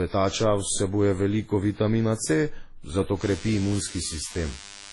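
A short speech recording carries two faults. Throughout, the sound has a dull, processed quality in which several kinds of codec damage are heard at once, with nothing above 11.5 kHz. The likely cause is transcoding between lossy codecs, with the artefacts pointing to a chain ending in MP3 and each stage re-encoding the previous one's errors. On a spectrogram this appears as a hard flat ceiling at 11.5 kHz with blotchy, speckled texture beneath it. From 3.21 s to the end, a DECT cordless phone buzz appears: a steady, thin, raspy buzz at 100 Hz, around 20 dB below the speech. It comes from a nearby handset or base transmitting every 10 ms, with the audio circuitry demodulating those radio bursts. A spectrogram shows a comb of evenly spaced horizontal lines at 100 Hz and its many harmonics beginning abruptly at 3.21 s, and the waveform shows regular pulses spaced 10 ms apart in the quieter gaps.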